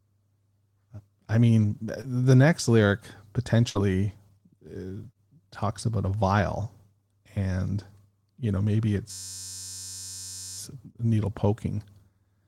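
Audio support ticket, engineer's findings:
Brief smear at 2.01 to 2.05 s, about 20 ms of missing audio filled by the receiver. Short concealed packet loss on the network path.

Last sound held and fading out at 3.69 to 3.77 s. The audio resumes about 60 ms further on. Burst of packet loss, with the gap concealed by extending the last sound.

Steady buzz at about 94 Hz from 9.11 to 10.58 s. A 10.67 ms slice repeats exactly, which fits a 512-sample buffer. System hang loop: driver stalled while the ring buffer kept cycling. Afterwards the audio continues with nothing apparently lost.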